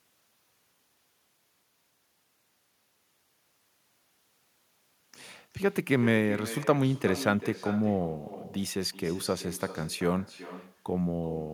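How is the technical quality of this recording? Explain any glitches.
The recording has one persistent fault. Echo with no canceller runs throughout: the far end's loudspeaker output re-enters its microphone uncancelled, returning the speech around 400 ms later at about 14 dB down, thin.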